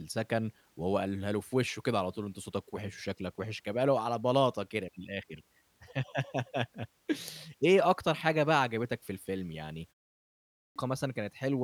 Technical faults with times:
10.28-10.76 clipped start after a pause

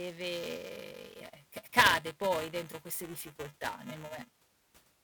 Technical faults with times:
0.00-5.04 buffer tearing

